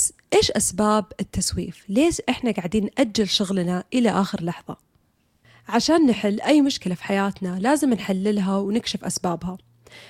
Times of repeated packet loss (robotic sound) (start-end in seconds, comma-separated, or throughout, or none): none